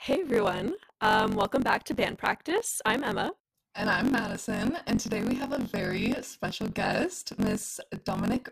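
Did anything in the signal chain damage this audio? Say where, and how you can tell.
Yes, at the driver or buffer stage, through the whole clip: a block size mismatch (truncated). One stage writes longer blocks than the next reads, so each block's tail is discarded and joined abruptly to the next. That produces a steady buzz at 46.9 Hz, which fits a 1024-sample read, and speech running about 1.12 times fast at roughly normal pitch. A spectrogram shows vertical striations every 21 ms; the waveform shows step discontinuities at each seam.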